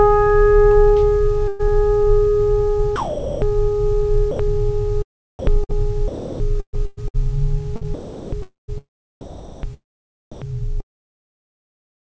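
A burst of packet loss runs from 1.48 to 1.74 s. Several consecutive packets of the music never arrived in time, so the receiver stretched the last sound it had for about 110 ms, letting it sag into a fading, held tone. Playback then picks up further along, and roughly 120 ms of the music is simply missing, so the phrase jumps forward.

Sound dropped by the voice detector follows from 2.96 to 3.42 s. The music gives way to a flat, steady noise bed for about 460 ms before returning. The likely cause is a sender-side voice detector judging the music to be background and stopping transmission, with comfort noise generated at the receiver to fill the gap. Everything heard there is synthetic, in the band-limited call sound, which carries nothing above 8 kHz.

Sound chopped by the voice detector covers three stretches: 4.31 to 7.87 s, 7.94 to 8.70 s, and 9.21 to 10.45 s. In each, the music keeps cutting in and out, with passages swapped for comfort noise totalling about 0.9 s, 0.64 s and 0.52 s respectively. 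This is likely a detector repeatedly toggling between sending and muting.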